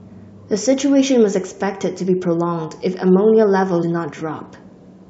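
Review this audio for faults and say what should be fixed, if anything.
At 3.82 s the speech jumps forward with a short smeared blip rather than a hard click, losing about a tenth of a second. This is compressed frames skipped: whole frames, consistent with about five 23.2 ms frames, were dropped, and overlapping neighbours blurred the join. To prevent it, check file integrity after transfer and make sure the decoder conceals damaged frames rather than discarding them.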